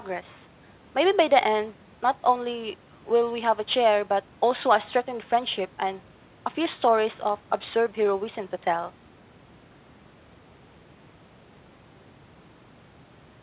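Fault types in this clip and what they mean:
No faults detected in the speech; the band tops out near 4 kHz, consistent with a G.711 mu-law call path.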